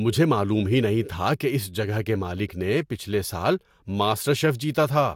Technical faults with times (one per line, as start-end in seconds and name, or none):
none